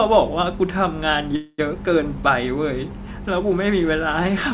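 Speech over a call link, band-limited with nothing above 4 kHz, which fits a G.711 mu-law path. At 1.36 s there's a call audio freeze lasting until about 1.60 s. The last bit of sound gets stretched into a fading buzzy fill for roughly 0.22 s, then drops to a brief silence of about 20 ms before the talker picks up exactly where they left off. That's likely the jitter buffer running dry while packets were held up in transit. Nothing is lost, but everything after is pushed back by about 0.22 s.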